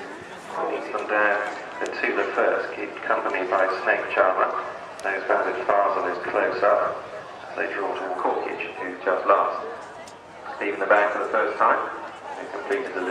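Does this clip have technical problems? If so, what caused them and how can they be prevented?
No, there are no technical faults to report and nothing here needs preventing.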